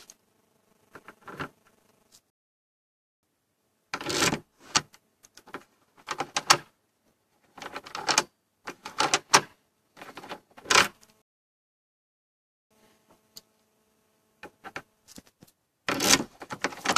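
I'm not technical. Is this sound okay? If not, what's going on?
No. Twice the player ran out of downloaded audio and had to wait for more, a rebuffering stall. The sound drops to silence from 2.30 to 3.23 s and from 11.22 to 12.71 s, then picks up exactly where it stopped, adding about 0.9 s and 1.5 s of gap.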